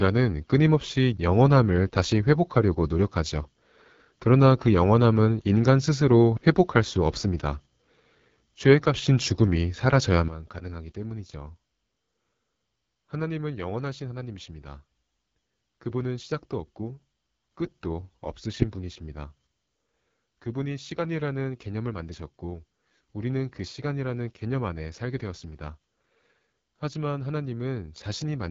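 A low-rate AMR wideband (HD Voice) codec pass has coded this speech, and the rough, raspy texture points to one of its lowest modes, around 8.85 kbit/s. The vocal tract model struggles at that rate, the damage is plainly audible throughout, and nothing reaches above 7.5 kHz. At 10.28 s a sudden gain jump, likely a level setting applied without a ramp, drops the speech and background noise together by about 12 dB, and the level stays down to the end of the recording.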